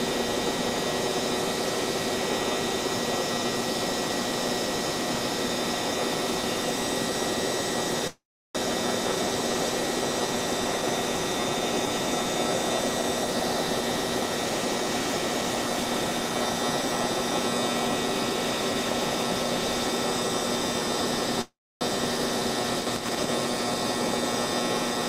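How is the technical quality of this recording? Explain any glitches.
Two short dropouts stand out, both call audio freezes: one from 8.07 to 8.57 s, the other from 21.41 to 21.83 s. Each time the last bit of sound smears into a fading buzz or hiss before going quiet, about 360 ms of silence in the first and 280 ms in the second. The sound then resumes where it left off with nothing skipped, so everything after runs roughly 470 ms late, and about 870 ms late after the second. The likely cause is delayed packets draining the jitter buffer, with the receiver stretching the last audio until the stream caught up.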